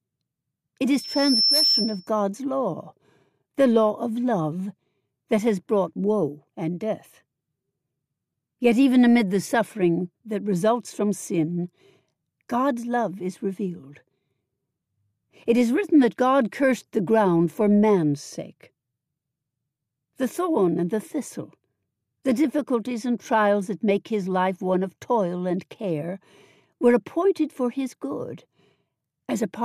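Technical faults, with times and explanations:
0.93 to 2.09 s, loudspeaker feedback squeal: a piercing 5.4 kHz tone swells over about half a second until it sits roughly 5 dB above the sound, then stops. A microphone hears its own loudspeaker, and at that frequency the loop gain exceeds one, so the tone feeds itself.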